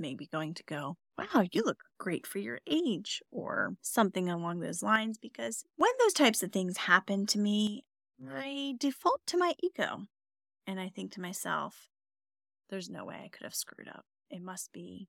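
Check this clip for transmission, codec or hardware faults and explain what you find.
Three abrupt level drops break up the speech. From 2.32 to 2.72 s, just after "you look great", the voice falls by about 6 dB and then recovers. It drops again from 4.96 to 5.81 s, between "or something along those" and "those types of things". From 7.67 s, after "of things happen to", it stays about 6 dB lower to the end. The likely cause is one channel drops out: one stereo side goes silent, so the mono sum loses half of the shared signal.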